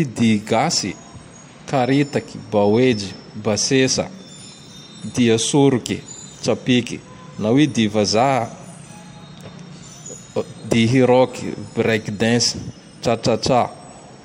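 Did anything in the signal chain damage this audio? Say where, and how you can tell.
No, nothing in this speech recording stood out as damage from any stage of the signal chain on listening.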